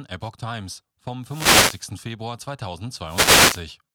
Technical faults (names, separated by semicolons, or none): wireless microphone noise hit